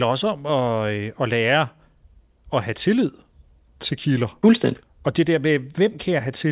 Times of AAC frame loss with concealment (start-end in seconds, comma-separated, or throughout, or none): none